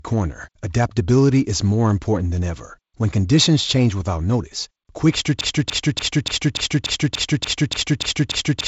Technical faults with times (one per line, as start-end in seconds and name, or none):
5.41-8.68 broken-record loop